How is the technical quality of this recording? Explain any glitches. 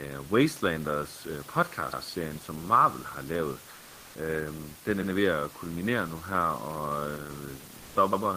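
The recording has two recurring glitches: stutters at regular intervals and brief patches where the background noise changes character.

Overlapping chunks occur at 1.93, 5.03 (after "den er", before "ved at kulminere nu") and 8.13 s. Each 3-second chunk starts 100 ms early, so that slice plays twice. Unlike a dropout, nothing is lost. The sound repeats as a stutter.

Comfort noise replaces the background from 3.75 to 4.15 s, just after "har lavet", and again from 7.77 to 7.95 s. The likely cause is Opus discontinuous transmission filling pauses with synthetic noise. The room noise, about 23 dB below the speech, turns smooth and featureless, roughly 1 dB quieter in the first gap. This sets it apart from a gate, which would mute it.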